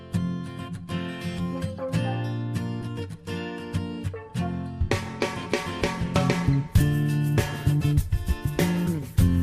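At 1.38, 2.81, 4.88, 7.63 and 8.86 s the audio jumps forward where compressed frames were skipped. Each time, whole blocks of the encoded stream never reach the output, either missing or rejected by the decoder as damaged. Each gap removes a few tens of milliseconds, which fits a 10 ms frame length.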